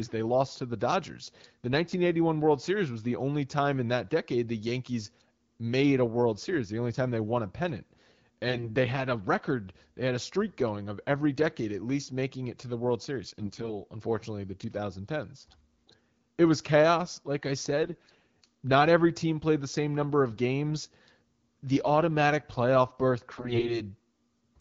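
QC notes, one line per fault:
8.48–8.72 s, 13.39–13.73 s, 17.84–18.20 s, 23.31–23.82 s: AMR bit errors. Short hoarse, gargly bursts where corrupted weakly protected frame bits misplace excitation pulses and skew pitch, gain and spectrum detail. The last burst is roughest.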